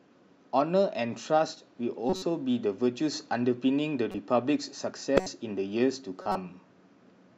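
Short chirps and noisy blips cut into the speech at 2.10–2.23 s, 4.12–4.15 s, 5.17–5.27 s and 6.22–6.36 s. The first and third are loudest and the second is faint. Each is a corrupt frame decoded: damaged compressed data played anyway, throwing energy into wrong frequencies across a few frames.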